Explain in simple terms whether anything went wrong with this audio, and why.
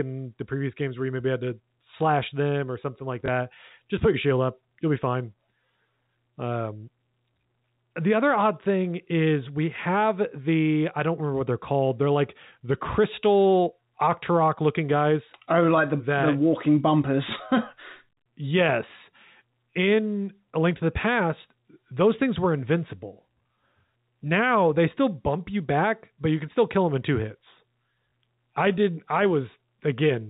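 Packet loss with the last packet repeated happens twice: at 3.26 s, right after "them or something like", and at 28.1 s, after "them in two hits" and just before "I did I". Each time one 20 ms piece of the speech never arrived, so the receiver filled the gap by replaying the piece before it. That copy doesn't join up smoothly with the voice's rhythm, so you hear a tiny click or hiccup. The telephone-quality sound, with nothing above 4 kHz, is simply how the phone coding works.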